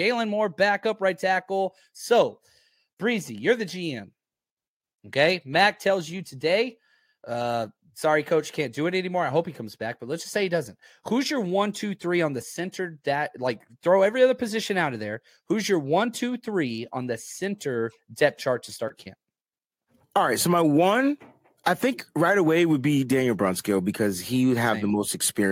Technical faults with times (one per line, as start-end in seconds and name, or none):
none